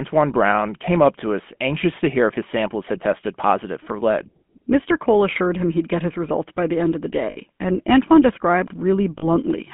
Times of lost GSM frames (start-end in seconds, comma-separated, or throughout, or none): 7.30-7.37, 9.18-9.25